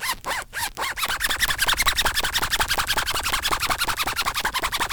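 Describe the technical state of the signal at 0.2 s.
At 0.2 s the audio is intact, with no fault present at that point.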